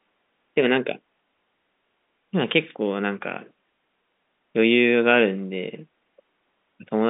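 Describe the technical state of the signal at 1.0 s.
At 1.0 s the audio is intact, with the low room noise sitting about 53 dB under the speech and the sound confined to the narrow 200 Hz to 3.7 kHz telephone band of the G.711 line.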